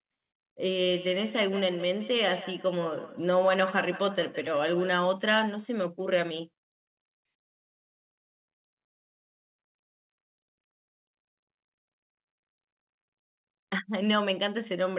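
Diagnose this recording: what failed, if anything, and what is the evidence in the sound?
The failure is at the call-processing stage: a feedback echo between two devices, from 0.8 to 4.95 s. Each syllable returns at a fixed spacing of roughly 150 ms, thinner and more ringing each pass, peaking at about -13 dB relative to the speech. One device is replaying the other's feed into a microphone whose echo canceller only subtracts its own playback, so the loop goes uncancelled. On a waveform, decaying copies trail each burst. On a spectrogram, which is empty above 4 kHz as a narrowband call path would be, evenly spaced faint repeats line up behind each syllable.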